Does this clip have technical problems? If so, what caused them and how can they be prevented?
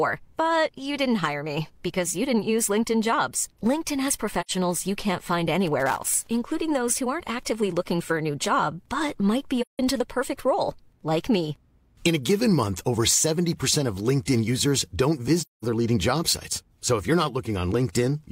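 Yes. There's AAC frame loss with muting at 4.41–4.51 s (just before "you can't find"), 9.61–9.79 s, and 15.39–15.64 s (between "users don't" and "leading job sites"). These are soft fade-out, fade-in holes of roughly 85, 170 and 213 ms, where dropped frames were decoded as silence. Use a reliable transport or error-protected streaming to prevent it.

From 5.80 to 6.27 s, between "you can't find" and "including those who aren't", there's loose connector crackle: irregular scratchy bursts from a contact intermittently breaking the signal. Reseat or clean the cable and connectors before recording.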